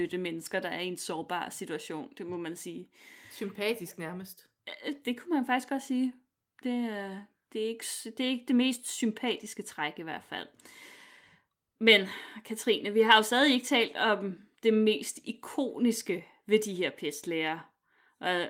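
Nothing in this speech recording stood out as a technical problem on listening.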